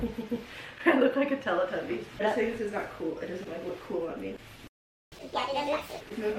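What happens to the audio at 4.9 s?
At 4.9 s the audio is in the middle of a playback stall. The sound cuts out at 4.67 s and stays silent until 5.12 s, a gap of about 442 ms. It stops abruptly, with no fade. When the sound returns, playback resumes. The likely cause is the player running short of data, or its playback thread being held up, so nothing reached the output until it caught up.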